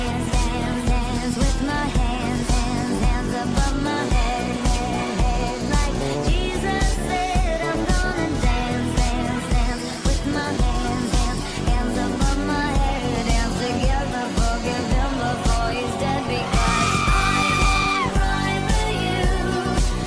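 No technical faults are audible.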